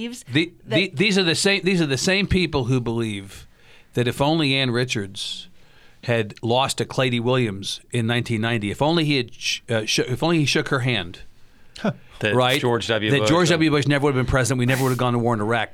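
At 12.48 s a wireless microphone noise hit cuts across the speech for about 0.1 s, ending at 12.58 s. It sounds like a quick swish of static. A second, longer hit follows from 14.66 s to 15.01 s, lasting about 0.35 s. Both come from the radio link. Reflections briefly cancel the FM signal, so the receiver's own hiss rises over the voice.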